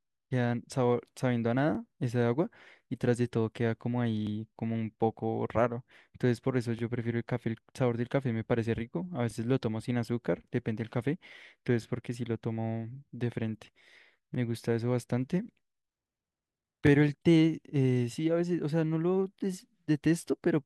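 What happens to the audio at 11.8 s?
At about 11.83 to 11.85 s the speech hits an overlapping-chunks join: the next 2.5 s chunk begins before the previous one finished, so roughly 20 ms of audio plays a second time. It sounds like a brief click or tiny stutter. On a waveform, a short stretch of cycles repeats with a discontinuity at the seam. On a spectrogram, a thin vertical broadband line marks the join, and the harmonics just before it are duplicated.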